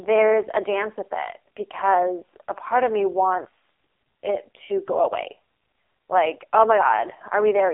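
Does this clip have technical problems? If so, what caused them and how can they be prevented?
Yes: an AMR narrowband mobile codec runs throughout, cutting everything above 3.7 kHz. Its buzzy, synthetic resynthesis, which fits a bitrate near 5 kbps, separates it from plain low-pass filtering. Recording over a wideband or direct connection instead of a narrowband mobile call path prevents it.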